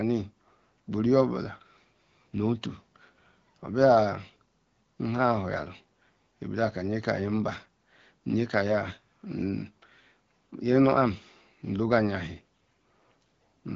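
Nothing stood out on listening to this speech recording, which comes across as wideband HD Voice audio carried at a rate where the AMR-WB codec keeps it clear.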